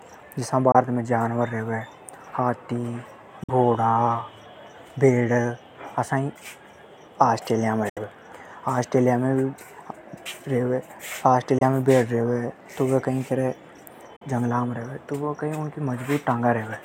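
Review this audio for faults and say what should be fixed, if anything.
Brief silent gaps cut into the speech at 0.72, 3.43, 7.89, 11.58 and 14.16 s, lasting about 23 to 70 ms, which is likely Bluetooth dropout: late packets discarded, playback skipping ahead. Keep the headphones close to the source and away from Wi-Fi interference, or choose a more robust codec setting.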